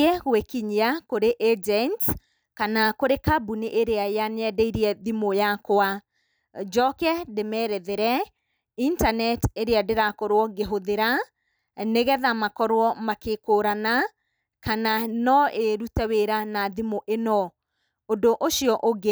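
No technical faults are audible anywhere in this recording.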